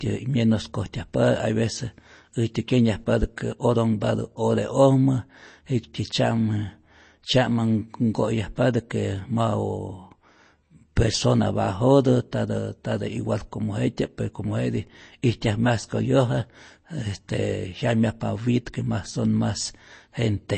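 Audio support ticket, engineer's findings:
Whole clip: watery, swirly speech, treble gone above 8.3 kHz, metallic chirps on s sounds, smeared attacks. Likely MP3 compression, starved encoder zeroing weak lines. Fits a low bitrate around 32 kbps.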